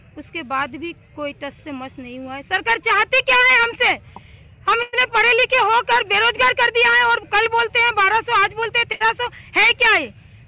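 At 4.82 to 4.94 s and again at 8.92 to 9.02 s, the last sound is briefly held and fades before the audio jumps ahead, skipping about 100 ms and 80 ms. Each is a burst of packet loss, concealed by the receiver over a narrowband band with nothing above 4 kHz.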